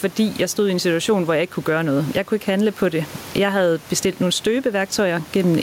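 Gain pumping runs throughout the clip: the gain is pulled down by roughly 10 dB under each loud sound, with the room noise about 29 dB below the speech, likely from excessive input gain being clamped by a fast limiter.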